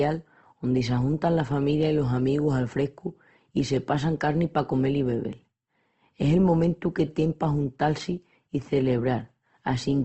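Opus compression runs through the whole of this speech clip, from start to finish. The damage is plainly audible: the speech sounds rough and grainy. The encoder kept each band's energy but ran short of bits, so it filled the detail with folded copies of lower bands or with noise. Nothing sounds above 8.2 kHz, which fits a wideband encode near 16 kbps in music mode. That low-rate Opus encode is the likely cause.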